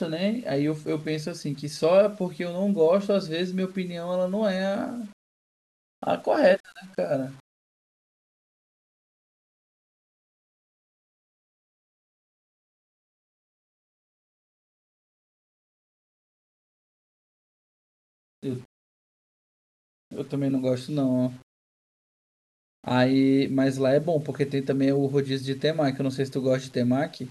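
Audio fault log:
throughout, low bit depth without dither: grainy distortion follows the speech, roughly 35 dB down, and drops to silence or sputters in pauses unlike steady hiss, likely from undithered 8-bit rounding.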